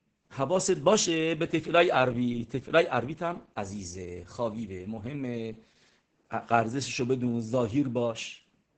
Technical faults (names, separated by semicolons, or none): Opus voice compression